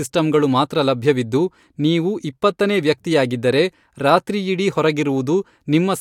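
Nothing goes wrong anywhere in this bit of speech, so there's no fault to point to at any moment.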